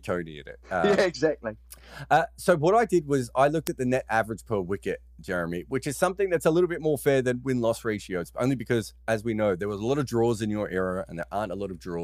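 Throughout the speech a steady 60 Hz mains hum sits about 25 dB below the signal. A ground loop or a nearby transformer is leaking the power line into the audio path. It is a low, constant tone with some low harmonics. Unlike a buzz, which is rich in upper harmonics and sounds rasping, this stays smooth and tonal, and it never changes with the speech.

From 0.65 s, just after "in it", until 11.23 s, word clock ticks appear about every 1.5 s, around seven in all. The receiving device runs on its own clock, not locked to the sender's, with a mismatch of roughly 15 parts per million. Each time the clocks slip by a sample, one sample is dropped or repeated. That gives a sharp tick of uneven strength. Its regular spacing sets it apart from random clicks or dropouts.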